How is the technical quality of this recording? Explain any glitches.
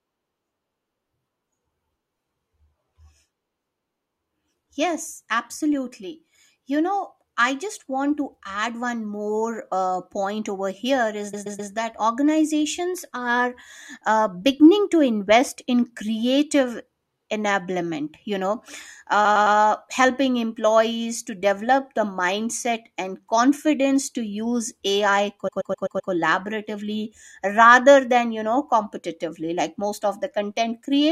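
The speech stutters in three places, each caused by repeated frames. At 11.33 to 11.71 s a 128 ms slice plays three extra times. At 19.24 to 19.56 s a 107 ms slice repeats three more times. At 25.47 to 26.11 s a 128 ms slice repeats five more times. A run of compressed frames was stored or sent more than once, and the decoder played each copy in turn. Those lengths fit blocks of about five or six frames. The repeats add 384, 320 and 640 ms to the recording.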